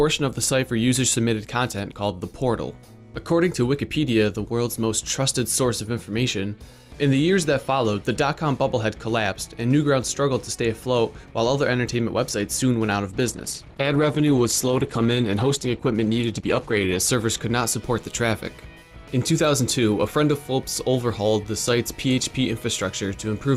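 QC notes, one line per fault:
13.08–17.08 s, adaptive stream at a lower bitrate: for four seconds the quality drops abruptly, with no gap in the audio, and the top end is cut away, leaving nothing above 12.3 kHz. The treble drops, and codec artefacts become audible. This is the player switching to a cheaper version of the stream while the connection slowed, consistent with an Opus stream falling from around 64 to 16 kbit/s, then switching back.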